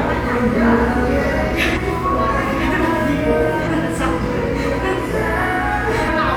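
Compressed frames are skipped at 0.51, 1.72, 3.63 and 6.04 s. Whole coded frames never reach the output, so the audio leaps ahead by roughly 150, 300, 200 and 200 ms, multiples of about 46 ms frames.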